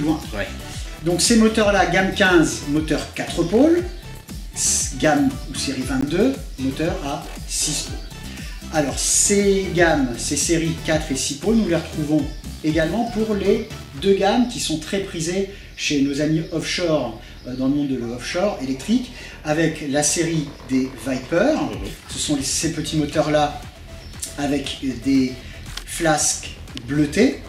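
Three times the output buffer likely went unfilled and was zeroed, giving a block of digital silence: 15 ms at 6.01 s, then 5 ms at 15.03 s and 16.61 s. The sound drops out and returns abruptly each time, and the two 5 ms gaps are short enough to come across as a tick or dip rather than silence.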